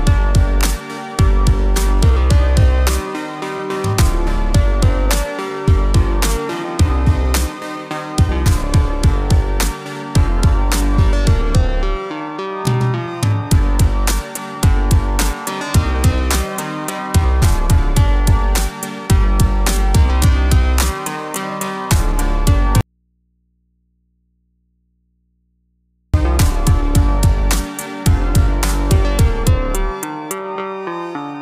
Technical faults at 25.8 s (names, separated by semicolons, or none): audio dropout to a faint residue